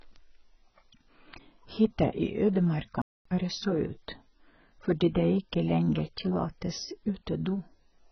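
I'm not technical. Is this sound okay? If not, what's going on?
No. Throughout this speech the sound is dull and muffled, and it has a watery, warbling texture. That points to heavy AAC compression as the likely cause. The warble is what tells it apart from a recording that is simply muffled.

From 3.02 to 3.25 s the speech stops dead for about a quarter of a second and then carries on. This is likely a playback stall, where the player briefly ran out of data. It sounds like a clean pause, unlike the tiny blip or crackle of a dropout.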